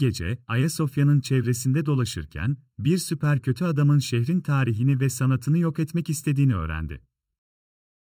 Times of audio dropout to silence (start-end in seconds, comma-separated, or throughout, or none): none